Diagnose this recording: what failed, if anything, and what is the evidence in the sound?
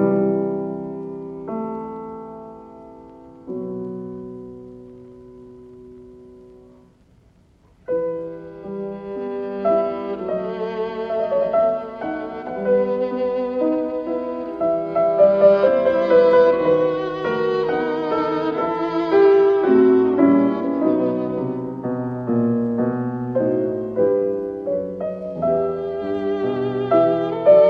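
Nothing stood out on listening that would point to a failure at any stage of the chain.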